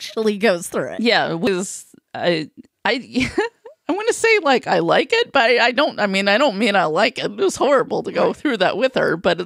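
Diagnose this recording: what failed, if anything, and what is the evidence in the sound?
A brief tick at 1.47 s, with the speech picking up from a different point straight after a near-instant dropout of a couple of milliseconds. This is a CD skip at the playback stage: the laser jumped to another turn of the disc's spiral, muted momentarily, then resumed there.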